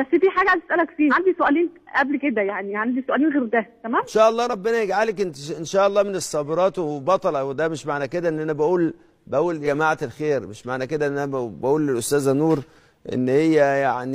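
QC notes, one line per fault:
1.07–1.13 s and 9.62–9.67 s, compressed frames skipped: the sound lurches forward, losing roughly a fifth and then a seventh of a second. Several whole 46.4 ms frames went undecoded, so the audio jumps ahead by their length.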